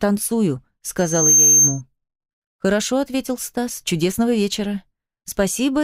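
From 0.98 s to 1.82 s, a loudspeaker feedback squeal rises out of the audio. A microphone is picking up its own loudspeaker, and the loop gain at 6.3 kHz exceeds one. The tone swells over roughly a third of a second, ending about 10 dB above the sound.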